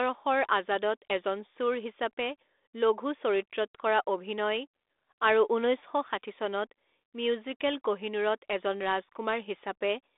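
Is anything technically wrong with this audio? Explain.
No, nothing is technically wrong with this audio.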